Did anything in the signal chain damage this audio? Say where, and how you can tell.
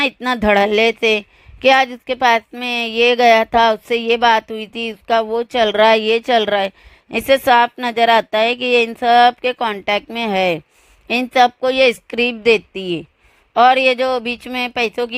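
No, nothing I can hear points to damage anywhere along the chain, so there's no stage to blame here.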